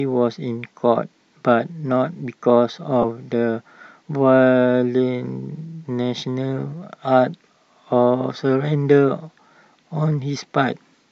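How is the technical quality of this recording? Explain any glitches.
There's one glitch to flag. From 3.02 to 3.05 s, lost LE Audio frames drop about 15 ms, which fits two 7.5 ms frames. The LC3 decoder fills the gap with the last spectrum using random signs, so the speech gets a brief grainy smear.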